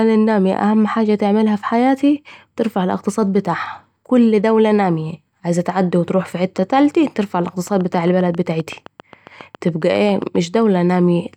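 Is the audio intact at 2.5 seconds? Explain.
Yes, at 2.5 seconds the speech plays through cleanly with no dropout, click, distortion or other fault.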